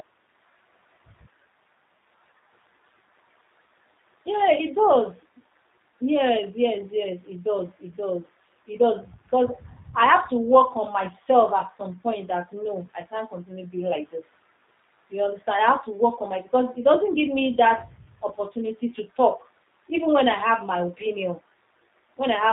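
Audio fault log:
throughout G.729 codec: speech is rough and synthetic and dull above 4 kHz, rebuilt from a vocal-tract model and sparse pulses, consistent with 8 kbit/s.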